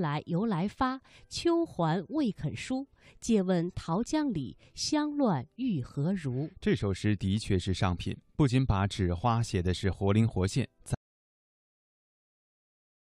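At 10.95 s the speech cuts off into silence with no room tone, lasting to the end; the input was likely lost, an audio dropout to silence.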